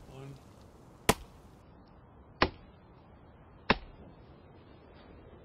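At 1.62 s an adaptive stream switches to a lower bitrate: treble vanishes above 5.6 kHz with swirly artefacts, consistent with 128 dropping to 16 kbit/s MP3. Unlike a dropout, there's no gap.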